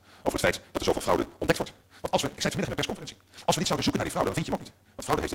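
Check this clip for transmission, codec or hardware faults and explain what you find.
One fault runs through the whole clip: a block size mismatch (truncated). One stage writes longer blocks than the next reads, so the tail of every block is discarded and the audio jumps forward 172 times a second. That regular cut produces a steady 172 Hz buzz, which fits a 256-sample read block. The sound runs about 1.88 times too fast, yet its pitch stays near normal. A plain speed-up would raise the pitch, which sets this fault apart.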